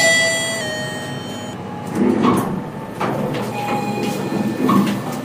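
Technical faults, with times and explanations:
0.61–2.05 s, drift correction step: the sound abruptly slows by about 5.9% and sinks roughly a semitone (about 105 cents), then snaps back to normal speed and pitch. Likely cause: clock-matching software altered the playback rate in one jump to rebalance its buffer, shifting speed and pitch together.
2.38–3.87 s, call bitrate drop: the audio turns rough and watery, with the top end dulled, for about 1.43 s at its worst before clarity returns. The coarser coding and lost high frequencies point to the encoder falling from around 96 kbps to roughly 28 kbps after the call's bandwidth estimate dropped.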